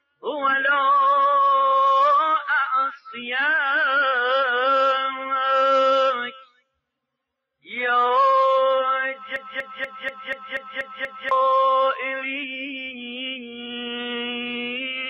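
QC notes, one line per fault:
0.00–0.23 s and 6.31–6.71 s: sound cut by the noise suppressor. The suppressor mistook this sound for noise and pulled it down by up to about 22 dB for a fifth of a second, then nearly half a second. The level sinks rather than the sound vanishing outright, unlike a dropout.
9.36–11.31 s: broken-record loop. A 241 ms fragment repeats exactly eight times back to back, and the audio that should have filled those two seconds is gone. The source likely stalled and kept resending its last fragment. Identical repeats set this apart from an echo, which decays.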